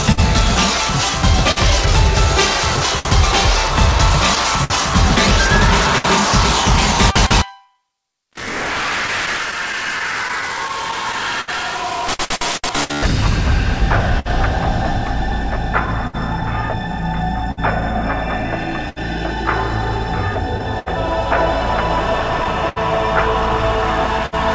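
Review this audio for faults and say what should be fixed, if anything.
Clock drift between sender and receiver runs through the whole recording. The sending clock runs about 4 percent slow, so the jitter buffer keeps draining. The receiver must stretch or repeat material and sometimes briefly runs dry, producing recurring small timing hiccups at uneven intervals. Prevention: add adaptive resampling or clock-skew compensation at the receiver so the buffer level stays stable.

Repeated timing corrections occur from 7.13 to 15.45 s, where playback runs at 99 percent speed. Because the sender is slow, the receiver repeatedly inserts short repeated pieces, adding about 70 ms in total. These are heard as slight hiccups and an unsteady tempo, always in the lengthening direction. Prevention: correct drift smoothly with continuous resampling rather than discrete insert-and-cut edits.

Scattered short gaps appear in two stretches. 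From 0.12 to 6.06 s there are about seven holes, roughly 0.3 s concealed in all. From 9.07 to 24.35 s there are about twenty, roughly 0.7 s concealed. The longest gap in each stretch is about 70 ms. Each hole was patched by extending the previous sound, leaving brief ticks, smears and hiccups over about 5 percent of each span. Prevention: enable forward error correction or redundancy and fix the network loss or late-arrival source.

The call path itself, with nothing above 8 kHz, fits G.722 band-limiting.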